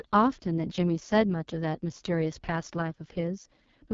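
From start to finish the speech runs through an AMR wideband (HD Voice) codec pushed hard, and it shows. The codec models the voice as pulses driving a vocal tract filter up to 6.4 kHz, then fills the top band with shaped noise, and nothing gets above about 7.3 kHz. Here the pulse model is starved, so the voice comes out rough and raspy with a gritty, buzzy edge, which fits the lowest 6.6 kbit/s mode.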